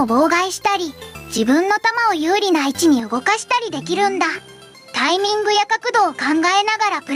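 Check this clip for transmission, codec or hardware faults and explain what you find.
Two faults stand out: constant pumping, and a change of input partway through.

Gain pumping runs the whole clip. The level swings around 10 dB, so everything sounds squashed. The likely cause is input gain set far too high, with a fast limiter clamping down on each peak.

At about 3.00 s the input was likely switched to a poorer device, with no gap at the switch. From there to the end nothing reaches above 11.8 kHz, so the top end goes duller. The level drops about 5 dB, and a new noise floor sits roughly 40 dB under the signal.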